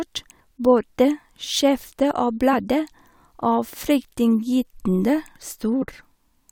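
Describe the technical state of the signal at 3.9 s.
At 3.9 s the speech signal is intact, with no audible fault at that moment.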